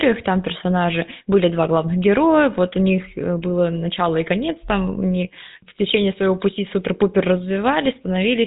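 From start to finish the speech carries GSM full-rate codec damage, plainly audible: pulse-driven vocal-tract modelling leaves a buzzy, gravelly edge, nothing above 3.8 kHz, consistent with 13 kbps.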